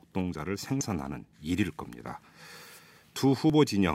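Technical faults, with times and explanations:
0.81 s and 3.50 s, damaged data in a compressed stream: corrupted bytes in the encoded speech stream make the decoder misread those frames and lose sync while hunting for the next valid frame header, leaving a brief chirp or blip each time.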